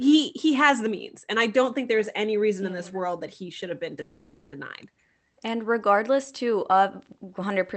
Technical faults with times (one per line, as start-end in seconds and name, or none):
4.01-4.54 call audio freeze